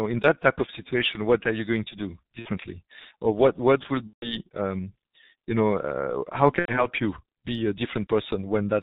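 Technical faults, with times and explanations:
throughout: G.723.1 codec. The speech is heavily damaged by this low-rate telephony codec, and the sound fits its 6.3 kbit/s mode. Nothing above 4 kHz gets through, so the voice is muffled. The codec models speech in 30 ms frames and adapts its vocal-tract model slowly, which makes the voice hoarse and smears fast consonant transitions.
2.39–2.51 s, 4.07–4.36 s, 6.59–6.88 s: VoIP packet loss concealed by the speech codec. The gaps last 60 ms, 150 ms and 90 ms, which fits two, five and three lost 30 ms frames. In each gap the decoder repeats its last pitch and filter at falling gain, so the sound turns into a fading buzz or coloured noise. The longer two gaps mute from the third frame onward. Because each frame is predicted from the one before, the speech stays degraded for a while after packets return, and each disturbance therefore runs past its lost span.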